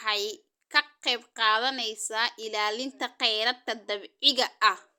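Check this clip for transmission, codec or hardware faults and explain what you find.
Nothing in this speech recording points to a fault of any kind. There is nothing further to report.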